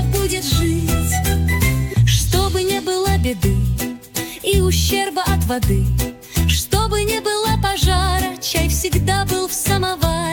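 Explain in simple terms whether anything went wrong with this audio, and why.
Nothing went wrong with this audio: there are no faults to hear anywhere in it.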